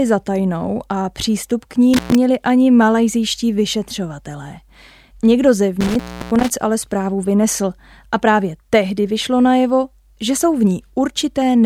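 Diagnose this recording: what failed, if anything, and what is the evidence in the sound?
Intermittent contact in the analogue wiring breaks this speech twice. The first break falls between "a přístup k ní" and "ani malajzijští vyšetřovatelé", from 1.94 to 2.15 s, with the line open for about 115 ms. The second runs from 5.81 to 6.50 s, ending just before "ale zprávu vynesl a", with about 323 ms open. A loose plug or cable separates for a moment: the signal vanishes with crackle at the break and return, and faint hiss remains underneath. A network or buffer dropout would instead fall to clean digital silence with abrupt, crackle-free edges.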